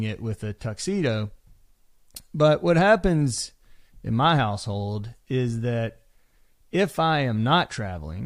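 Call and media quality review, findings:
Nothing stood out on listening to the speech recording, so there are no findings to log against it.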